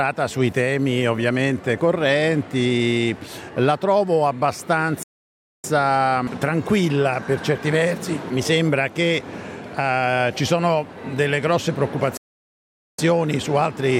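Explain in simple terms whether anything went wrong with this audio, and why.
Two playback stalls occurred, likely because the player ran short of data or was briefly held up, so its output went silent until it recovered. The sound cuts off mid-flow from 5.03 to 5.64 s (0.61 s) and again from 12.17 to 12.99 s (0.81 s).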